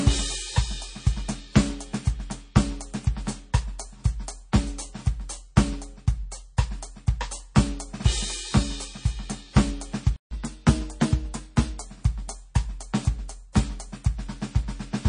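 Throughout the music there is a watery, swirling quality, with detail fading in and out between moments and nothing above 9.8 kHz, so the top end sounds dull and closed in. The damage is plainly audible. The likely cause is MP3 compression at a low bitrate, around 32 kbps. Starved of bits, the encoder discards weaker frequency lines, which then flicker on and off from frame to frame, and it cuts the treble at a fixed point.

At 4.52 s and again at 6.57 s, a brief hiss arrives just ahead of a sharp attack, and the attack itself sounds softened. This is pre-echo, spreading about 11 ms and 10 ms before the respective onsets. The codec distributes its quantisation noise across a whole block, so when a transient lands late in that block, noise scaled for the loud part leaks into the quiet moment before it.

From 10.16 s to 10.31 s the music cuts out mid-flow for about 150 ms, then resumes. This playback stall was likely caused by the player running out of data or having its thread blocked, leaving the output silent until it recovered.

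Immediately after, from 10.31 s to 11.81 s, the music runs 1.1 times fast and sits about one and a half semitones sharp. This is catch-up at higher speed. The player resamples its backlog to play it faster, so speed and pitch rise together. Over this span, the faster playback wins back roughly the 150 ms lost in the stall.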